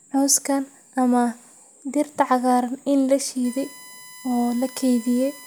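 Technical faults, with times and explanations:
3.44 to 5.46 s, USB whine: a fixed-pitch tone enters at 1 kHz and its harmonics under the speech, loudest at 2 kHz and roughly 20 dB below the signal. The bus's 1 ms frame timing leaking through power or ground sets the pitch, which stays locked rather than drifting like feedback.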